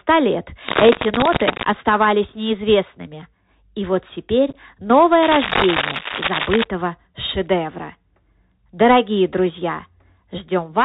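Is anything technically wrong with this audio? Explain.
Yes. The speech has three kinds of technical fault.

Throughout, the audio carries the Bluetooth CVSD headset codec at 64 kbps, and its damage is plainly audible. CVSD sends one bit per sample saying only whether the signal should step up or down, with an adaptive step size. Nothing above 4 kHz survives, so the sound is narrowband. Loud high-frequency content outruns the step and distorts, sibilants turn scratchy, and a granular hiss sits underneath. On a spectrogram, energy stops sharply at 4 kHz, with a noise floor spread across the band below.

Cable scratch noise appears from 0.67 to 1.66 s and again from 5.22 to 6.64 s, somewhat louder than the speech itself. It sounds like rustling, uneven scratching laid over the speech. The likely cause is a worn cable, connector or control being moved, its contact resistance fluctuating rapidly. 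The waveform shows dense, irregular spiky bursts in those stretches, and the spectrogram shows broadband vertical smears that are patchy rather than steady.

Unconcealed Bluetooth headset packet loss occurs between 4.50 and 4.56 s. About 22.5 ms of audio, a handful of short voice packets, is missing, scattered over 45 ms, with the longest single gap 11.2 ms. The link inserted silence or an idle pattern instead of concealing the loss, so the speech is briefly chopped and crackly, with abrupt edges. The waveform shows tiny flat gaps with hard cutoffs, and the spectrogram shows thin vertical blank slivers.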